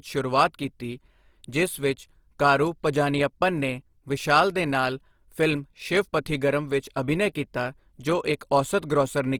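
From start to finish the speech carries plainly audible Opus compression artefacts, the likely result of encoding at a low bitrate in the region of 24 kbps. The codec holds the energy in each band but, short of bits, refills the finer detail with folded or noise-like content, so tones come out rough and grainy instead of swirly. The bandwidth stays full, with content reaching up to about 20.2 kHz.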